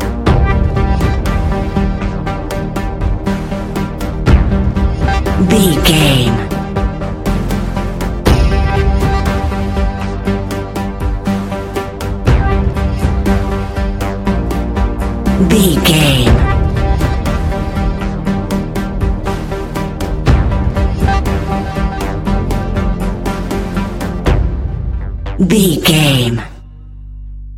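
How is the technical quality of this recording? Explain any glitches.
Technical quality takes a hit from one problem that runs through the whole recording. Hard clipping: peaks are driven about 8 dB past the ceiling, so roughly one percent of samples get sheared flat, adding crackle on the peaks.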